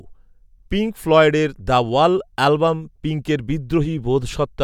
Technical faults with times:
none

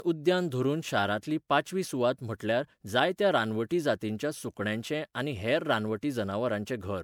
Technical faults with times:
0.00-7.03 generation loss

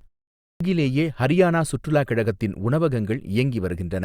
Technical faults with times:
0.41-0.60 clipped start after a pause

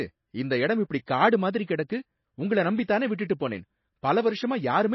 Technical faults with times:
0.00-4.95 MP3 compression
1.06 pre-echo

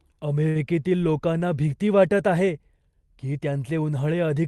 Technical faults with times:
0.49-0.58 burst of packet loss

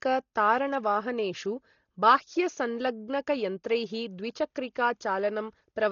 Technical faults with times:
0.00-5.91 Dolby Digital compression

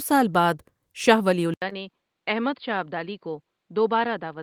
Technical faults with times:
1.54-4.42 input switched to a poorer device
1.69-1.73 short concealed packet loss

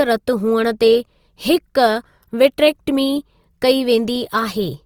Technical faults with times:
0.00-4.85 Opus compression

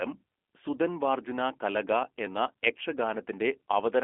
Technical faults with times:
0.00-4.03 G.729 codec

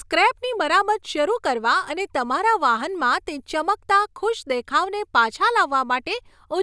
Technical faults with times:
none

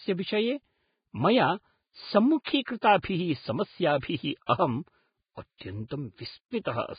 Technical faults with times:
0.00-6.99 Vorbis compression
2.65-2.68 pre-echo

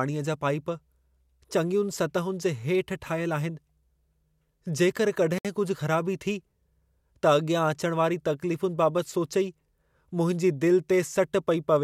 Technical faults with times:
5.38-5.45 Bluetooth stall

